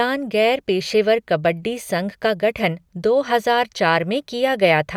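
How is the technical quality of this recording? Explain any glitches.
No glitches can be heard anywhere in this recording. Nothing in the signal calls for explanation.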